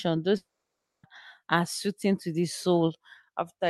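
From 0.37 to 1.05 s the speech breaks off into a brief fading buzz, then silence. This is likely a long network dropout; it resumes at "are suiting to the".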